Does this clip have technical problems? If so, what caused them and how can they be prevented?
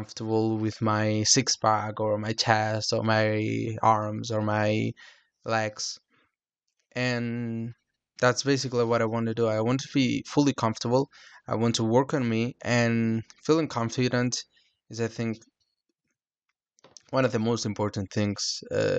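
Yes. At 10.91 s the speech has a single sharp click from dropped samples. A fraction of a millisecond of audio is missing, far too little to remove any sound, but the waveform jumps straight from one value to a later one, and that step is heard as a click. The likely cause is a brief buffer overrun or underrun in the recording chain. Larger audio buffers and a shared clock between devices prevent this.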